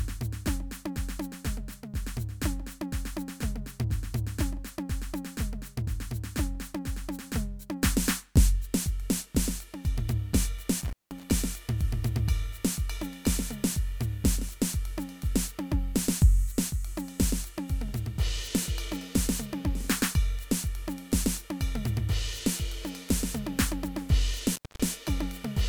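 A loose connection in the signal path briefly opens twice, an intermittent contact fault, at 10.80–11.23 s and 24.54–24.80 s. Each time the music cuts out for about 183 ms and then 222 ms, with crackle at both edges and faint hiss filling each gap.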